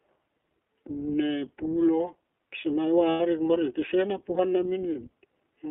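Throughout, the speech passes through the narrowband iLBC codec, which fits its 15.2 kbps, 20 ms-frame mode. Everything beyond roughly 300 Hz to 3.4 kHz is lost, leaving plainly audible rough, synthetic coding damage.

From 3.10 to 3.22 s, lost iLBC frames, about 100 ms, force the decoder to repeat the last pitch cycle with noise, producing a held, buzzy vowel before clean recovery.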